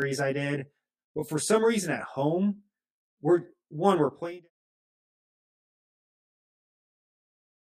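Right from the start and all the way through, the speech has a channel delay with comb filtering. One side arrives roughly 20 ms behind the other, and when the two get folded to mono, anything common to both cancels at regularly spaced frequencies. The first notch sits down around 30 Hz, with more repeating up the spectrum, so everything comes across rough and slightly doubled. That coloration carries on right into the smooth fade-out, which runs from about 4 s to 4.51 s.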